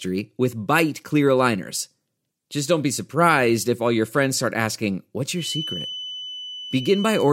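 At 5.33 s a feedback whistle appears and runs to the end of the speech. It is a thin, steady tone near 3 kHz, roughly 10 dB under the speech, swelling and fading slowly in level. The likely cause is a loudspeaker-to-microphone loop sitting just at the edge of feedback.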